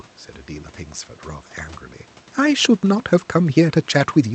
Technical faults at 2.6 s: none

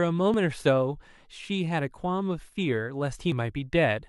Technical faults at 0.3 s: dropped buffer (overrun)

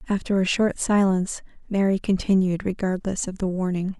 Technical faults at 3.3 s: corrupt frame decoded

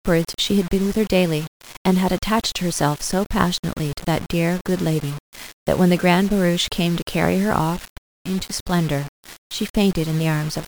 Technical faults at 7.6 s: low bit depth without dither

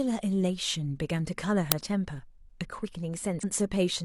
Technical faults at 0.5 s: none

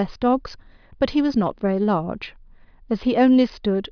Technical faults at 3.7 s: none

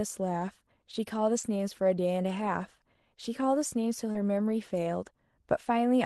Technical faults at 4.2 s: short concealed packet loss; lost packet rebuilt from error correction

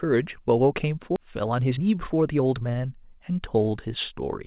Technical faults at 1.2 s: skip ahead; jitter buffer speed-up

